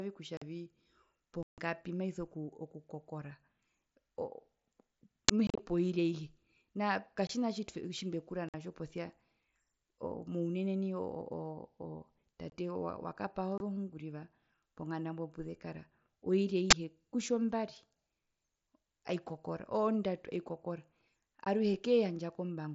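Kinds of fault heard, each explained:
Unconcealed Bluetooth headset packet loss: voice packets between headset and phone went missing, and nothing was generated to fill the space, so the mSBC wideband audio drops abruptly to silence or an idle pattern with hard edges. Gaps fall at 0.37, 1.43, 5.47, 7.27, 8.49, 12.50, 13.58 and 21.45 s. Most last 15 to 52 ms, in steps that fit 7.5 ms frames. The hole at 1.43 s runs 150 ms, and at 5.47 s scattered losses over 120 ms chop the sound.
Uninitialised buffer: the playback path sent out a buffer before any audio had been written into it, so stale memory contents were played as samples. This produces a short, loud burst of digital noise that has nothing to do with the surrounding sound. A 10 ms burst occurs at 5.29 s, and a 20 ms burst at 16.71 s comes directly after "ponganda mbo puzekara oiri".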